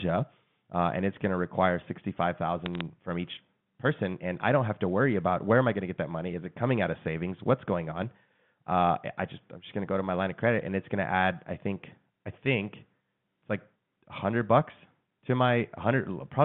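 Bit errors on a digital phone line appear from 2.66 to 2.81 s. Over the G.711 mu-law connection, a small fraction of bits, roughly a tenth of a percent, arrived flipped. Each flipped bit corrupts a single sample, and a flip landing on a sign or high-order bit throws that sample far from its true value. The result is a short burst of sharp ticks and crackle laid over the speech, whose band-limited telephone sound continues unchanged beneath it.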